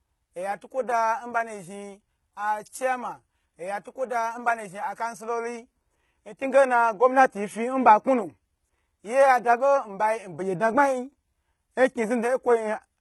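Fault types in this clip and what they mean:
HE-AAC compression: Across the whole speech clip the treble sounds bright but synthetic, with s sounds coming out gritty, lispy and metallic, and the upper harmonics not sitting in step with the lower ones. The damage is heavy. The likely cause is HE-AAC coding at a very low rate, around 16 kbps, where only the lower spectrum is truly encoded and the top end is regenerated by copying lower bands upward under a coarse envelope.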